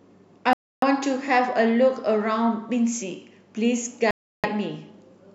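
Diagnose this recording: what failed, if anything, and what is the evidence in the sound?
The speech drops out twice into complete silence, from 0.53 to 0.84 s (about 0.29 s) and from 4.11 to 4.46 s (about 0.33 s), before the sound carries on. The likely cause is a Bluetooth stall at the wireless playback link: packets were held up, the headphone buffer emptied, and output paused until they arrived. On the waveform each gap is a flat line, and on the spectrogram a clean vertical blank band cuts across every frequency.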